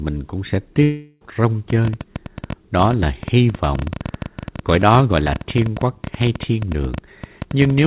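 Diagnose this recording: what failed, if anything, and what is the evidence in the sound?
Network stage: a long network dropout follows "cũng sẽ" from 0.83 to 1.22 s. Concealment fills it with a fading buzz, and speech resumes with that stretch lost, likely through packet loss.

Analogue stage: a train of clicks runs from 1.70 s to the end at an irregular 12 per second, peaking about 5 dB above the speech, likely from electrical interference.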